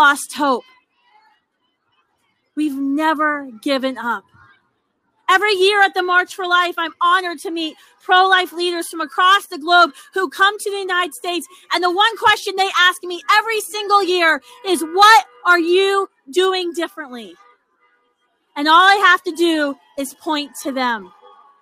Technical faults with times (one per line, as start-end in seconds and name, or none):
none